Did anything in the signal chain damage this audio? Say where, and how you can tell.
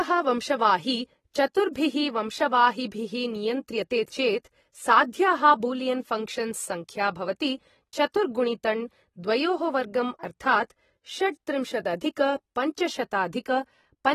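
Yes. The damage sits at the codec stage and runs through the whole speech clip. Nothing remains above 13.8 kHz. Sibilants sound fizzy and smeared. This is likely AAC compression, with a lowered cut-off that fits a low rate near 24 kbps.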